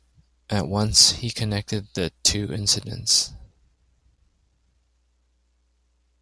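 Nothing in the recording stood out as a technical problem on listening.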